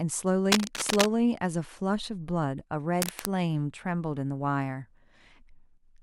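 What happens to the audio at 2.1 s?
Nothing goes wrong at 2.1 s; the speech carries on intact through that moment.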